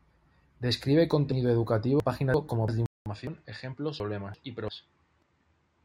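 Speech, with three kinds of fault. Audio missing between chunks shows up as abrupt skips at 1.32, 3.27 and 5.22 s, each losing roughly a twentieth of a second. Spaced about every 2 s, they likely come from chunked processing dropping a sliver at each boundary. On a waveform, each appears as a hard butt joint. Chunks out of order cause garbled, jumbled moments from 2.00 to 2.68 s and from 4.00 to 4.68 s. A block of about 341 ms plays one slot late, leaving three hard joins. An input switched to a poorer device is the likely cause of the change at 2.86 s. After a 200 ms silence, the sound turns dull and about 5 dB quieter, with nothing above 9.1 kHz and a new noise floor about 40 dB down. The spectrogram shows a flat ceiling and a brighter background band from there to the end.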